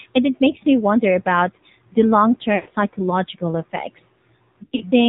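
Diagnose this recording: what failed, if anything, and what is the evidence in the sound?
The codec stage failed. The AMR narrowband mobile codec cuts everything above 4 kHz. The speech sounds buzzy and synthetic throughout, which fits a low rate near 7.4 kbps.

The radio link failed too, causing lost AMR speech frames. Just after "wonder about the long", 2.56 to 2.71 s smears and fades. Scattered dropouts recur from 4.64 to 4.83 s. The decoder stretched stale pitch settings at falling gain.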